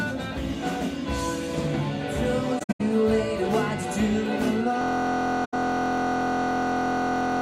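AAC frame loss with muting at 2.59 to 2.81 s: missing frames were zeroed, leaving soft-faded gaps totalling 171 ms, the longest around a tenth of a second. A system hang loop begins at 4.82 s and runs to the end: one 23.22 ms slice, fitting a 1024-sample buffer, repeats as a steady 43.1 Hz buzz. Further AAC frame loss with muting, 5.44 to 5.54 s, fades out 85 ms.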